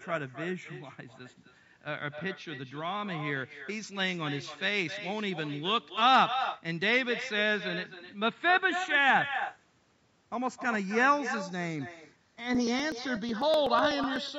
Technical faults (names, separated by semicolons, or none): channels drifting apart; echo with no canceller; periodic USB or driver dropouts